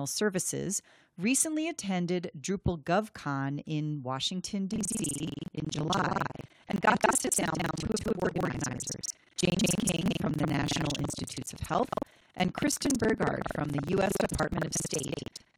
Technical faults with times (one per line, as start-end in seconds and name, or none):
4.69-15.58 buffer tearing